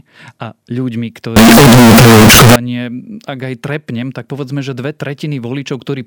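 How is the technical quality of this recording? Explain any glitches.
The recording has one serious glitch. From 1.36 to 2.56 s the speech turns into a blast of harsh, very loud, nearly square-wave sound sitting at an almost fixed, high level, with background noise as loud as the speech, though the pitch contour still comes through. This is most likely a float read as integer error: 32-bit float samples interpreted as 32-bit integers, so sign and exponent bits dictate level. Ordinary clipping would flatten only the peaks and leave quiet background quiet.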